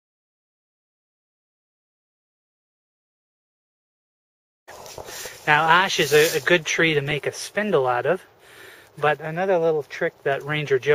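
Nothing stood out on listening; no technical faults could be heard anywhere in the recording.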